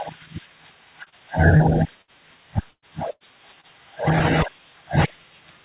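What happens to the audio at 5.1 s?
Nothing goes wrong at 5.1 s: the speech carries on intact through the WebRTC call path, with the narrow telephone-band sound of its G.711 mu-law coding and nothing above 4 kHz.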